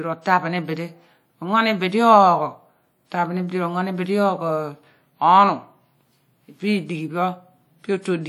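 Throughout the speech the sound carries plainly audible WMA compression, most likely from encoding at a bitrate around 48 kbps. Long transform blocks smear quantisation noise across tens of milliseconds, so onsets ring and a washy hiss rises and falls with the signal. On a spectrogram, weaker components appear as missing patches and speckled gaps between stronger bands, with smeared energy around transients. Content stops near 20.1 kHz.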